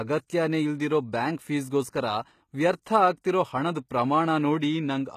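HE-AAC compression runs from start to finish: the sibilants sound gritty and metallic, and nothing reaches above 14.9 kHz. The likely cause is spectral band replication, where copied lower bands stand in for the real treble, which fits a low bitrate around 20 kbps.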